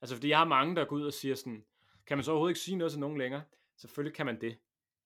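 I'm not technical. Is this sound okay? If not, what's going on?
Yes, nothing is wrong with this recording.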